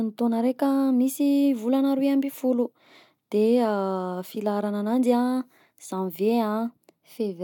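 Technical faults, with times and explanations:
No technical faults are audible.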